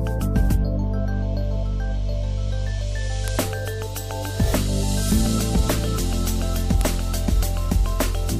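At 3.28 s and 6.81 s a sharp, loud snap cuts in: a file header played as audio, where joined WAV pieces kept their header bytes, which play as samples. Unlike an ordinary splice click, it is equally harsh whatever the signal is doing.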